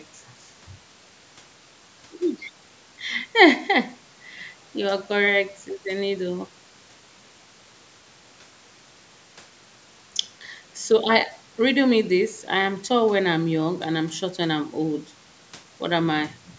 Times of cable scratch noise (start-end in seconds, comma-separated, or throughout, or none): none